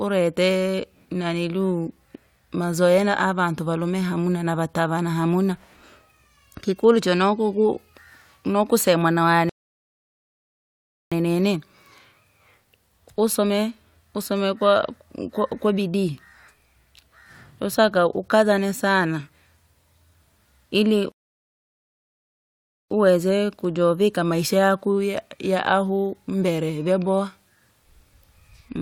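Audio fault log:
9.49–11.12 s and 21.12–22.91 s, rebuffering stall: the speech drops to dead silence for about 1.6 s, then 1.8 s, and picks up exactly where it left off. The player ran dry of downloaded audio and waited for more, so nothing's lost but time.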